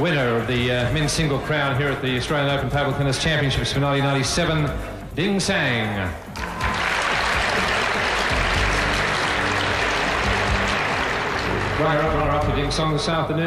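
No technical faults can be heard anywhere in the audio.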